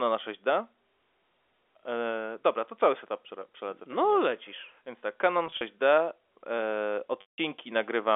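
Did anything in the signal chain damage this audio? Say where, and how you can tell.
Yes. Network packet loss with pitch repetition: at 5.47 s, brief buzzy holds; at 7.21 s, 170 ms lost, the repeated pitch fading to silence before speech returns.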